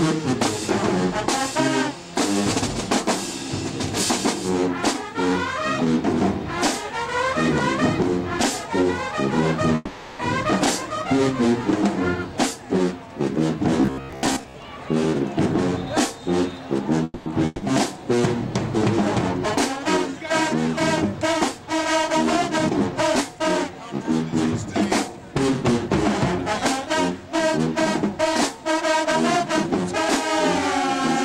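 A call audio freeze runs from 9.75 to 10.21 s. The sound stretches into a fading buzz for about 440 ms, then picks up exactly where it stopped, with nothing lost. Packets were likely held up in transit, so the jitter buffer ran dry and the receiver extended the last sound while it waited. The result is an inserted gap that pushes everything after it 440 ms later.

Robotic sound from repeated short buffers appears from 13.81 to 14.56 s. The audio takes on a rigid, metallic buzz at 66.8 Hz, loosely tracking the underlying sound. New audio was likely arriving too rarely, so the receiver looped the last fragment of about 15 ms to fill the time. That fixed loop length imposes the steady 66.8 Hz pitch, and most of the real audio in this stretch is skipped rather than played.

A jitter buffer speed-up follows from 15.07 to 16.98 s. The audio plays at 104% speed with unchanged pitch. The buffer was holding more than its target, so the receiver trimmed short pitch-period slices over and over, removing roughly a tenth of a second in total to bring the delay down.

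A second call audio freeze occurs from 17.04 to 17.28 s. About 220 ms is filled with a decaying buzz, including a brief silence of about 10 ms, and then the sound resumes intact. Once again the likely cause is a stall in arriving packets, which delays everything after it by 220 ms.

A long network dropout comes right after, from 17.46 to 17.64 s. A fading buzz of about 160 ms covers the gap, but when the audio returns it has jumped ahead and 360 ms of the original is gone. No packets likely arrived for that stretch, and skipping past the missing part cut the overall delay by about a fifth of a second.

A jitter buffer slow-down runs from 17.99 to 20.70 s. Playback drops to 98% speed at the same pitch, with slightly drawn-out sounds. After the dropout the buffer was low, so the receiver repeated individual pitch periods many times to build up about 70 ms of reserve.

A second jitter buffer speed-up spans 24.12 to 27.60 s. 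The audio plays at 103% speed, again at unchanged pitch. The receiver cut repeated short slices totalling roughly a tenth of a second to shrink an excess buffer back toward its target.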